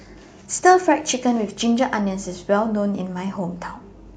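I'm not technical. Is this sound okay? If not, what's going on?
Yes, nothing is technically wrong with this speech recording: the sound stays steady and unbroken the whole way, with no dropouts, glitches or distortion.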